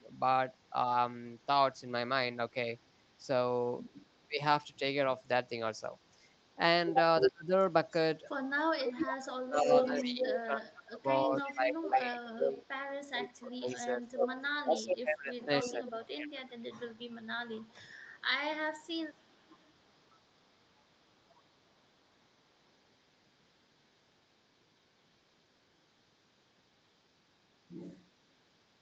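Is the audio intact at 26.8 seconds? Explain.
Yes, the speech at 26.8 seconds is intact, with no fault at that moment.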